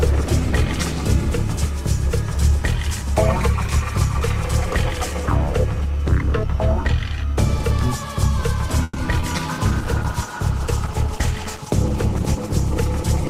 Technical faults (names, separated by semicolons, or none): call audio freeze; short concealed packet loss; call bitrate drop